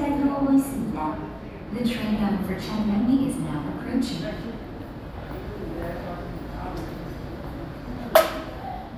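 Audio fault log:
No technical fault can be heard anywhere in this recording of sounds. Nothing in the audio calls for a log entry.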